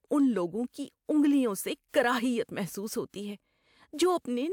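No technical faults can be heard anywhere in the speech here.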